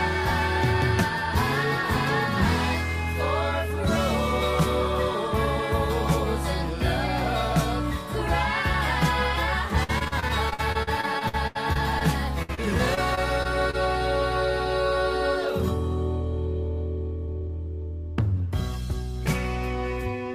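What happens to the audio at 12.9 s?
Repeated packet loss (robotic sound) from 12.42 to 13.75 s: short gaps up to 61 ms are patched with repeated sound, giving choppy chatter rather than one clean dropout.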